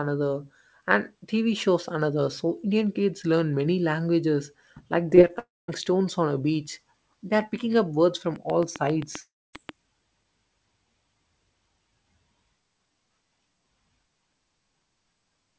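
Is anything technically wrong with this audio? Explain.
Yes. The speech has gone through a call path with content stopping at 8 kHz, consistent with G.722 wideband coding, and it shows three kinds of fault.

From 5.10 to 5.31 s there is repeated packet loss with a robotic sound. Four short gaps, the longest 20 ms, were each patched by extending the preceding audio, so about a third of that stretch is synthetic fill. The result is choppy, robotic-sounding speech with small pieces missing.

There are two long network dropouts, likely caused by the network. The first runs from 5.39 to 5.70 s, with about 0.3 s of audio lost. The second runs from 9.20 to 9.55 s, with 0.34 s lost. In each, concealment carries the last sound briefly as a decaying buzz, and then roughly a quarter second of silence follows before the speech resumes with that part gone.

From 8.36 to 9.70 s there is a train of clicks, likely caused by electrical interference or a faulty connection. 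About ten similar pulses arrive at a regular 7.5 per second, peaking around 15 dB above the speech. They are heard as steady ticking, and they continue through the second dropout.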